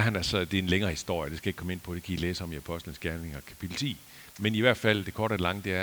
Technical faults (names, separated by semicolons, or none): low bit depth with dither